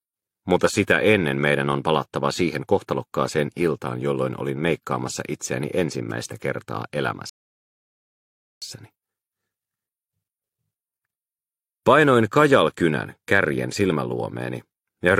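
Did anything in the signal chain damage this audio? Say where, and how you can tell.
Yes. A rebuffering stall at the network and playback stage: sound drops to silence from 7.29 to 8.62 s, then resumes exactly where it stopped. Nothing is lost. The player simply starved, adding 1.3 s.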